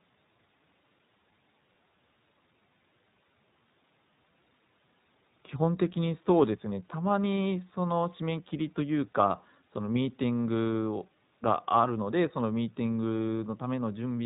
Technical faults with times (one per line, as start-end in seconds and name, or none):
0.00-14.25 iLBC codec